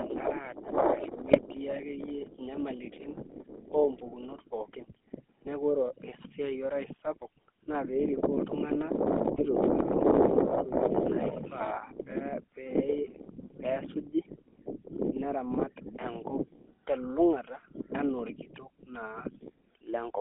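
From start to finish the speech carries the GSM full-rate codec, confined to a narrow line band of roughly 250 Hz to 3.5 kHz, with nothing above it. The damage is plainly audible: the coder rebuilds the vocal tract from a filter excited by a sparse, regularly spaced pulse train, and that coarse excitation gives the voice a buzzy, gravelly edge. The character fits the 13 kbps full-rate coder.

GSM bit errors break in three times, at 1.30 to 1.41 s, 9.34 to 9.45 s and 15.54 to 15.57 s. Corrupted bits in the decoder's filter, pitch or gain parameters distort the spectrum or push the level up for those frames, so the speech briefly turns to squawks, pops and gargling. The first two bursts last about 0.1 s, which points to around five consecutive frames. The third is shorter, consistent with about two frames.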